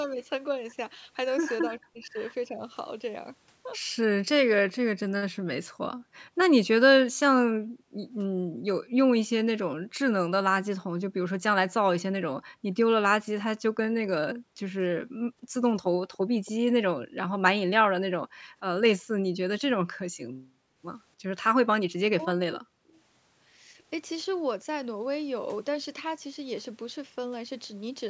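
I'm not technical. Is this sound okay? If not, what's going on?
No. There are three kinds of problems here.

The first is speech suppressed in double talk, from 1.69 to 2.6 seconds and again from 21.55 to 22.94 seconds. The voice drops away in pieces, about a third of a second in the first stretch and over half a second in the second. This is likely because both sides spoke at once, and the call's echo canceller turned everything down.

The second is background gated by the echo canceller, from 5.38 to 9.98 seconds, at 12.51 to 12.69 seconds, and from 14.35 to 20.81 seconds. The quiet room sound behind the voice suddenly disappears, then comes back. This happens while the other side's audio plays through a loudspeaker, so the canceller mutes the microphone hard.

The third is an echo leak, from 15.83 to 16.51 seconds. A faint copy of the voice comes back about 0.28 seconds late. The likely cause is a loudspeaker on one end, whose echo canceller failed to remove everything its microphone picked up and sent it back.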